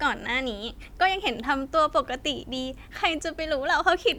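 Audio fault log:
No technical fault is found anywhere in the speech signal.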